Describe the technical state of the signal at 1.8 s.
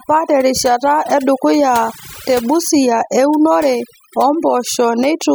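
At 1.8 s the speech carries overdone noise removal, present across the whole clip: bands near the noise floor are gated away, leaving a lowered, twinkling background.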